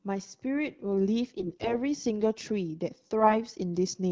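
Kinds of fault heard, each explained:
AMR bit errors: Flipped bits in the weakly protected parts of AMR frames reach the decoder undetected, because the checksum over the critical bits still passes. Excitation pulses land in wrong positions and the finer pitch, gain and spectral values are off. In this speech, from 1.38 to 1.75 s and again from 3.20 to 3.36 s, pitch and level roughly hold but the sound turns hoarse, scratchy and gargly against the otherwise clean wideband coding.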